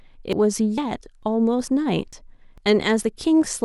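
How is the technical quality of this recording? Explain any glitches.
The speech is interrupted by a regular chain of skips at 0.33, 0.78, 1.23, 1.68, 2.13, 2.58 and 3.03 s. This is audio missing between chunks: roughly 50 ms is likely lost at each handover between half-second chunks, and the sides butt together. On a waveform, you'd see abrupt seams every 0.45 s; on a spectrogram, you'd see thin vertical discontinuities.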